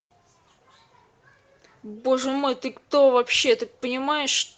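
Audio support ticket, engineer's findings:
Engineer's findings: no fault found in this speech clip; the WebRTC call path carries it as expected, with the top end cut off at 8 kHz as the Opus codec's band limit would give.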